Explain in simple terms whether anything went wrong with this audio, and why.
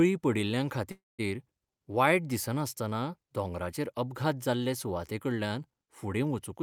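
From 0.91 to 1.21 s there is a call audio freeze. The last sound stretches into a fading buzz or hiss, then about 0.19 s of silence. The speech then picks up where it stopped, with nothing lost, just later. Delayed network packets likely emptied the playback buffer.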